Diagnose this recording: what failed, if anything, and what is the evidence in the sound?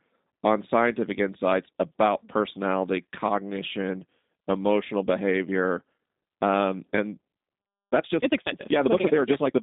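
The codec stage is the main problem here. The whole recording has the sound of a G.729 codec. There's nothing above about 3.8 kHz, the band sits roughly between 200 Hz and 3.7 kHz, and the speech has that slightly rough, buzzy, synthetic edge you get when a vocal tract filter plus a handful of pulses per frame stands in for the real waveform. The damage is plainly audible and fits an 8 kbit/s G.729A path.

Then there's a time-stretched section from 7.83 s to the end, where the pace suddenly jumps to about 1.66 times normal while the pitch holds steady. It sounds rushed, the way it does when short slices get dropped to squeeze the audio into a shorter slot without shifting its pitch. That's most likely a length-fitting step at the processing or playback stage.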